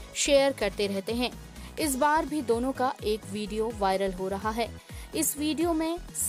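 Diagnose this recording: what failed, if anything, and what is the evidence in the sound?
Nothing in this recording stood out as a problem on listening.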